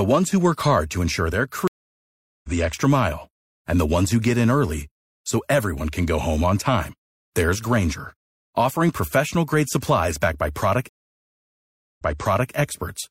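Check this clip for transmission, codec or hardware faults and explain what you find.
Two stream reconnects break the speech. At 1.68 to 2.50 s, after "hard to ensure their", the sound cuts to 0.76 s of silence and returns about a second further on at "the extra mile and", so a stretch is skipped. At 10.89 to 12.53 s, after "professional grade supplies backed", 1.08 s of silence gives way to audio 0.56 s earlier, repeating what was just heard. Each time the connection dropped and the player reconnected with a fresh decoder mid-stream. The second resumption repeats earlier audio because the server resent a burst.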